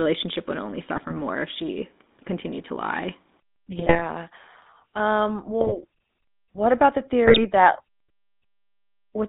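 From the start to the end, the speech carries the GSM full-rate codec's plainly audible buzzy, gravelly roughness inside a line band of about 200 Hz to 3.7 kHz, which fits the 13 kbps full-rate coder. It models the vocal tract and drives it with a coarse, regularly spaced pulse excitation, so the roughness sits in the voice itself. That sets it apart from a band-limited line carrying clean, smooth narrowband speech.

GSM bit errors break in three times: 3.77 to 4.01 s, 5.61 to 5.72 s, and 7.24 to 7.45 s. About ten, five and seven 20 ms frames are hit, with roughly 1.4 to 2 percent of bits flipped. Corrupted filter, pitch and gain values warp the spectrum and jolt the level, so the voice squawks, pops and gargles. Packet loss would leave gaps or smeared fill instead of these harsh, wrong sounds.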